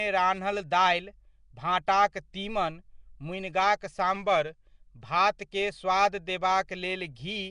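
Right through the speech there's a rough, hissy, underwater smear with nothing above 10.6 kHz, likely Nellymoser compression starving weak bands and filling them with noise. From 4.16 to 4.66 s, just before "भातकेँ स्वाद", playback slows about 5% and drops nearly a semitone (94 cents), then snaps back, likely a drift correction step.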